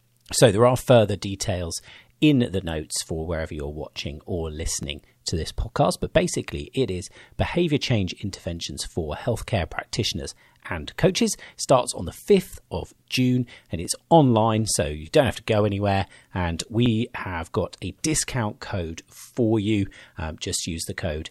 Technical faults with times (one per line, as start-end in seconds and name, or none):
4.83 overlapping chunks
13.85 overlapping chunks
16.86 overlapping chunks